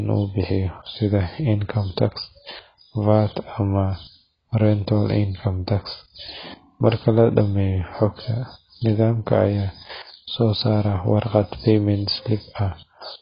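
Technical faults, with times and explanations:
Throughout, AAC compression: nothing above 5 kHz and heavy smearing, so the speech sounds dull and warbly, likely a very low-bitrate AAC-LC encode.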